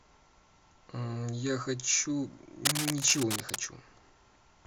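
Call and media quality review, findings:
Cable scratch noise, 2.65 to 3.64 s, about one second of dense, uneven scratching and rustling over the speech, roughly as loud as the speech itself. Likely a worn cable, connector or control being moved, with contact resistance fluctuating rapidly. Unlike isolated clicks or dropout crackle, the noise comes as dense, uneven bursts.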